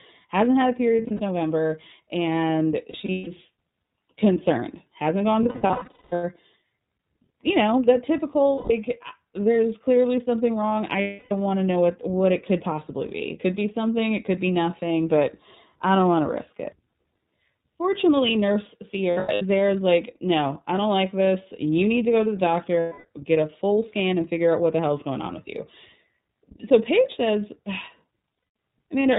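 The speech passes through the iLBC codec throughout. Its narrowband coding, which fits 30 ms frames at around 13.3 kbps, removes everything above 4 kHz and plainly roughens the voice into a slightly synthetic tone. Lost iLBC frames occur at 0.96–1.21 s (after "hasn't had a"), 2.90–3.28 s, 5.43–6.24 s, 8.55–8.71 s, 11.01–11.32 s (between "clearly something wrong I" and "want to know what"), 19.11–19.42 s, 22.80–23.05 s (before "get a full scan") and 28.37–28.55 s. Each time, missing packets make the decoder repeat the last pitch cycle mixed with noise, which produces held, buzzy vowel-like smears. The longest, lasting about 0.8 s, is at 5.43 s.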